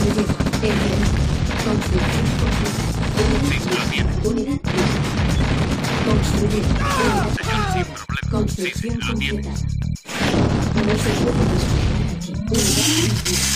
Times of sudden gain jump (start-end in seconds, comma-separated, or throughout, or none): none